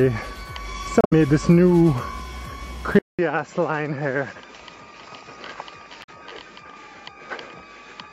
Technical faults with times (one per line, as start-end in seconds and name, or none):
1.01-1.13 damaged data in a compressed stream
2.99-8.13 input switched to a poorer device
6.00-6.09 damaged data in a compressed stream